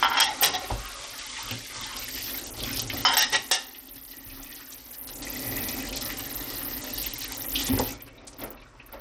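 From start to finish it has plainly audible Bluetooth SBC compression, likely from a starved bit pool, around 80 kbps: gritty, flickering treble, nothing above 18.3 kHz.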